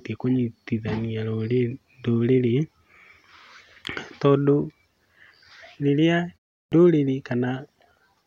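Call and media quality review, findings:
Clipped start after a pause, 6.65 to 6.72 s: roughly 69 ms of onset swallowed after a 0.35 s gap; output device slow to wake from idle.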